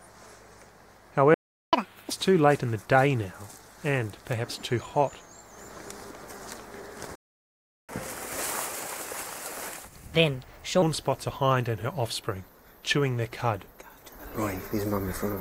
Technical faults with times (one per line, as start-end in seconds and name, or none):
1.34-1.73 playback stall
1.73-2.11 catch-up at higher speed
7.15-7.89 playback stall
7.89-10.82 catch-up at higher speed